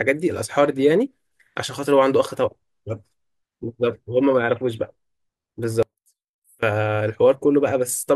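From 5.83 to 6.63 s the speech drops by about 27 dB to a faint trace. This is likely one channel inverted, cancelling when summed to mono.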